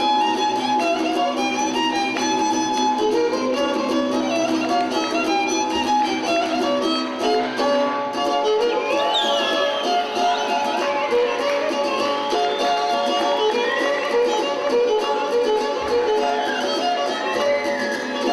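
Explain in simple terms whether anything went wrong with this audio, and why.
Nothing went wrong here.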